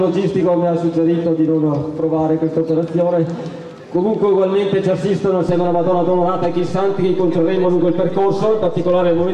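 A DC step occurs at 5.49 s. At that instant the waveform's zero line jumps to a new resting level about -26 dBFS away from centre and stays there through to the end at 9.34 s, as happens when a converter recalibrates or a source carrying an offset is switched into the path. The sudden shift is heard as a single low thump at 5.49 s, while the sound carries on over the displaced baseline.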